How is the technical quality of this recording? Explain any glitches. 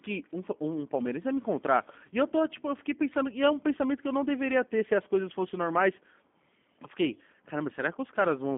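The quality is limited by a G.729 codec across the whole recording. From start to finish the speech is band-limited and slightly rough. Nothing sounds above about 3.6 kHz, and the line runs roughly 200 Hz to 3.5 kHz. The codec rebuilds speech from a vocal tract model, pitch prediction and a few coded pulses per frame, which fits an 8 kbit/s stream. That leaves the speech plainly synthetic, though intelligible.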